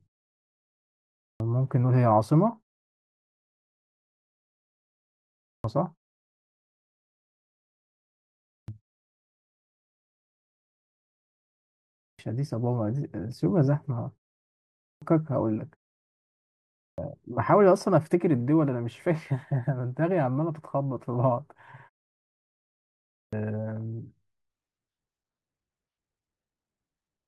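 Speech with a clipped start after each pause: at 0.9, 5.19, 8.23, 11.7, 14.5, 16.5 and 22.81 s, the first 0.45 to 0.52 s of sound is swallowed. The output device apparently sleeps in silence and wakes too slowly, so words begin abruptly, missing their onsets.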